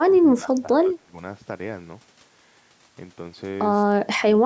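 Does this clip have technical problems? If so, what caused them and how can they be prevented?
Yes. From 0.0 to 1.14 s and again from 3.86 to 4.27 s the speech dips by roughly 20 dB in patches, likely speech suppressed in double talk, with the echo canceller mistaking overlapping talk for echo. Better echo cancellation or a headset prevents this.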